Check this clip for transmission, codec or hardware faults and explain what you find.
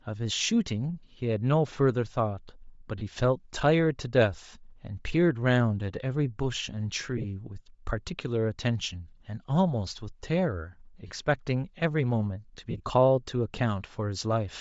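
Two faults are present in the speech: continuous codec damage and four short dropouts.

Bluetooth LC3 compression runs through the whole recording and is plainly audible. LC3 cuts the signal into very short frames, here consistent with 7.5 ms, and at a tight bit budget, which sounds like roughly 32 kbps, it discards much of the upper spectrum and fills the gaps with synthetic noise. The voice therefore has a breathy, grainy edge on its higher frequencies, most likely from LC3 at that low rate.

Lost LE Audio frames appear at 2.98–3.03 s, 7.17–7.24 s, 11.07–11.11 s and 12.71–12.80 s. When frames fail to arrive, the decoder repeats the last spectrum with randomised phase signs. That keeps the level up but scrambles the detail. Each gap becomes a brief noisy smear instead of silence. The first and third last about 30 ms and 37.5 ms. The second and fourth are broken, with about 45 ms lost across 60 ms and about 67.5 ms lost across 90 ms, in runs of around 20 ms and 40 ms at most.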